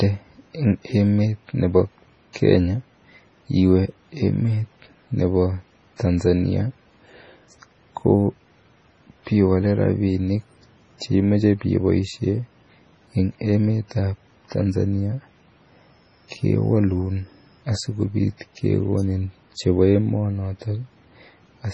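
From the first second to the last, the speech has a hard ceiling, with nothing above 10.5 kHz, and a watery, swirly texture where quiet detail flickers in and out. That pattern is most likely heavy MP3 compression. The encoder, starved of bits at a rate that fits something around 24 kbps, lops off the treble at a fixed point and drops weaker frequency lines, which then switch on and off from frame to frame.

At 2.33 s you get pre-echo. A brief smear of hiss runs for about 27 ms, up to 2.36 s, just ahead of a sharp attack, and the attack itself lands soft rather than crisp. The codec spread its quantisation noise across the whole block. Because the loud onset came late in that block, the noise meant to hide under it leaked into the quiet stretch before it.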